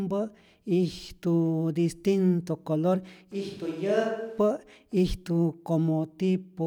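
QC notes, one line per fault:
3.32–4.38 s, switch to a distant microphone: after "distinto color" the speech abruptly turns roomy and hollow, thinner in the bass, about 10 dB quieter, with room noise roughly 35 dB below it. A farther microphone likely replaced the close one, then it snaps back.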